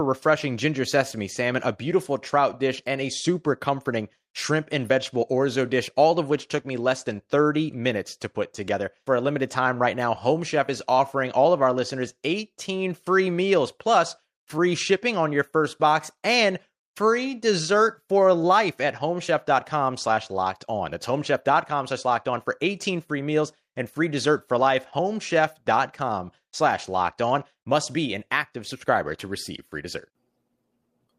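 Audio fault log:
No faults are audible anywhere in the speech.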